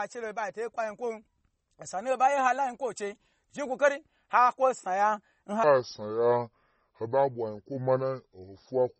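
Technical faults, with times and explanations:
Throughout, MP3 compression. Weak detail flickers in and out, giving a watery, swirly texture. S sounds chirp and onsets smear. The heavy damage fits a low bitrate around 32 kbps, likely from MP3 encoding.
5.64 to 9.0 s, section at the wrong speed. From 5.64 s the speech plays at 0.694 times its proper speed to the end. Pitch and pace drop together, about seven semitones lower, so the voice turns deep and slow. A clock mismatch during editing or playback is the likely cause.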